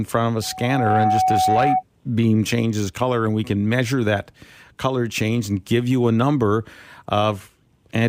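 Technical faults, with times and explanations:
0.42–1.83 s, loudspeaker feedback squeal: after "front of a", a 749 Hz tone swells over about half a second to roughly 5 dB above the speech, gone by "beam changes color and". The microphone hears its own loudspeaker, and there loop gain exceeds one, so the tone feeds itself.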